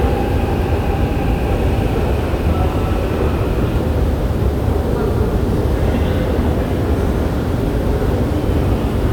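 Listening through the recording of everyday sounds, nothing stood out as a technical problem at any point.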